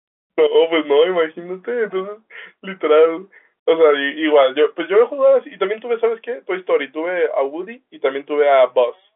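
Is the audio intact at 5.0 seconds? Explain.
Yes, at 5.0 seconds the audio is intact, with nothing beyond the narrow band and faint level-following hiss of the G.711 telephone coding that carries the whole clip.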